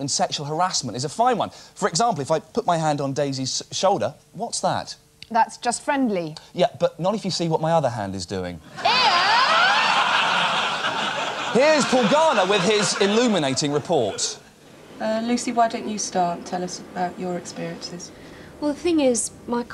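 No technical faults are audible anywhere in the clip.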